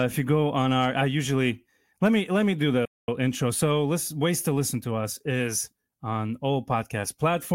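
A speech clip with a playback stall: just after "me let me do", the sound cuts out from 2.85 to 3.08 s, a gap of about 226 ms, likely because the player ran short of data. The waveform drops to a flat line and the spectrogram shows a blank vertical band.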